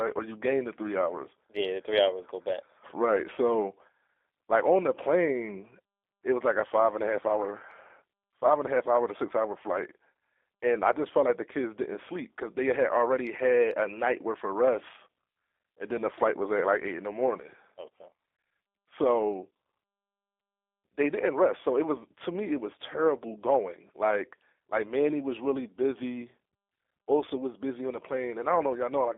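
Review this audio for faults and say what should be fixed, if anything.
The speech sounds thin, slightly rough and synthetic from start to finish, with nothing below about 300 Hz or above 3.6 kHz. That is G.729 codec coding, at a rate consistent with 8 kbit/s. The codec does not keep the waveform. It rebuilds each 10 ms frame from a vocal tract filter, a pitch predictor and a few pulses, so the fine detail is lost and the clip has the buzzy quality of a narrowband phone line. To prevent this, record or route the call over a wideband codec such as G.722 or Opus, or capture the audio locally rather than from the compressed VoIP stream.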